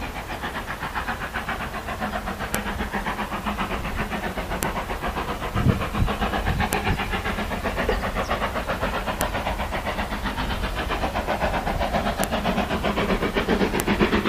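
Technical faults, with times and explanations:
2.55, 4.63, 6.73, 9.21, 12.24 and 13.80 s, file header played as audio: a sharp, loud click snaps out at each of these points, regardless of the surrounding sound. Each marks a join where a WAV piece's header bytes were decoded as samples instead of being stripped.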